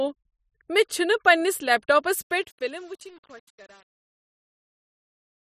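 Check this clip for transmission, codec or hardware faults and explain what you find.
One fault is present: truncation distortion on a fade. From 2.22 s, right after "پنٛنس لیپ ٹاپس", the speech fades out and takes on a gritty, stepped texture that is worst from 2.43 s to the end of the clip. The fade was computed with too few bits and no dither, which fits an 8-bit stage. As the level drops toward the smallest available step, the waveform collapses into a few square steps instead of a smooth curve.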